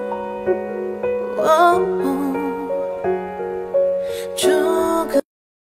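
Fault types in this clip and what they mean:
Compressed frames skipped: Whole chunks of the encoded stream never get played, so the audio just leaps forward. You hear it twice, at about 0.49 s and again around 1.81 s. The first jump loses roughly 150 ms, which fits about three 42.7 ms frames, and the second drops roughly 100 ms, more like two frames.
Cut-off end: The final stretch of audio was never written out or played, so the sound stops dead at about 5.2 s, right in the middle of whatever is happening. There's no natural decay or fade at all. It falls straight into digital silence for the remaining half second or so, which is the tell-tale sign that the last buffers simply went missing at the tail.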